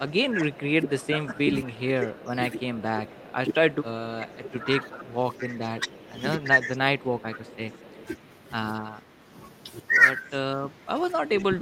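From 0.06 to 7.6 s the speech is suppressed in double talk: the level dips by up to about 15 dB, in patches for roughly four seconds in all. It recurs from 8.9 to 9.3 s and from 10.23 s to the end, both times with dips of about 20 dB. The likely cause is the echo canceller failing to separate the talker from the loudspeaker echo while both sides spoke, so it turned both down. A waveform shows the envelope sagging.

There is also echo leak, with a delayed copy arriving 234 ms after the speech at 0.37–3.75 s, 4.92–5.44 s, 6.75–8.07 s, 10.28–10.35 s and 11.38–11.43 s. It sits about 15 to 30 dB below the direct sound. This is likely residual loudspeaker pickup that the far end's canceller passed back. On a spectrogram it looks like faint repeats of the same patterns, shifted 234 ms later.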